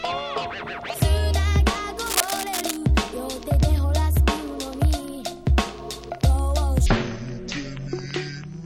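From 2.06 to 2.77 s there's a burst of cable scratch noise, a dense, ragged scratching sitting only about 5 dB under the sound. It's likely a worn cable or connector being moved, its contact resistance jumping around and spraying crackle into the signal.

Then from 6.86 s to the end, at 8.65 s, we get a section at the wrong speed: it's running at 0.526 times normal, so everything drops around ten semitones and drags, sounding deep and sluggish. Likely it was played or edited against the wrong clock.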